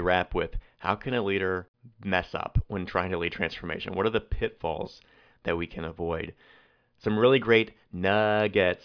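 Listening to the speech recording, nothing stood out as a technical problem.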